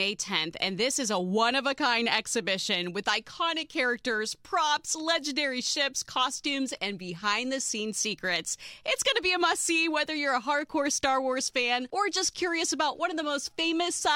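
No technical faults can be heard anywhere in the audio, and the signal stays steady and intact throughout.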